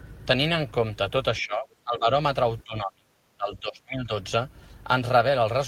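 Speech suppressed in double talk affects this speech clip from 1.39 to 2.07 s and again from 2.64 to 4.11 s, with the level dipping by roughly 20 dB and then about 30 dB, likely because an echo canceller could not separate its own talker from overlapping far-end echo and attenuated both.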